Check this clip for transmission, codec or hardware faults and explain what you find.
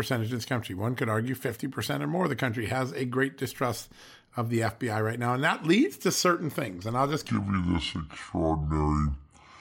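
One fault: the final stretch of the speech, from 7.28 s to the end of the clip at 9.61 s, is a section at the wrong speed. It plays at 0.643 times its proper rate, so the voice turns slow and deep, dropping roughly seven semitones. The likely cause is a player or editor running that part against the wrong clock. Unlike a pitch shift alone, which lowers the voice but keeps its pace, here timing and pitch sink together, dragging out every syllable as well as deepening it.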